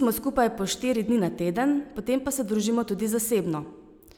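No technical faults can be heard anywhere in this speech recording.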